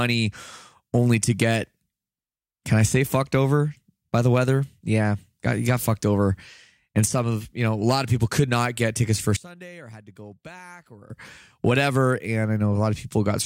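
From 9.37 to 11.10 s, just after "not get tickets for", the speech falls by about 20 dB and turns faint. The likely cause is one channel inverted, which cancels the shared centre in mono. The waveform shrinks sharply, and the spectrogram dims across all bands.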